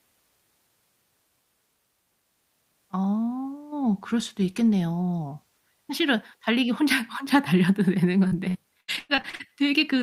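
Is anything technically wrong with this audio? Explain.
Yes. Near the end of this speech clip, from about 8.27 to 9.49 s, there's repeated packet loss, the robotic-sounding kind. Packets kept going missing or arriving late across that stretch. Each hole got patched by stretching out the sound just before it, then the next hole hit soon after. There are nine gaps, the longest around 99 ms, and concealment covers about a third of the span. So it comes out choppy, with bits of speech dropped.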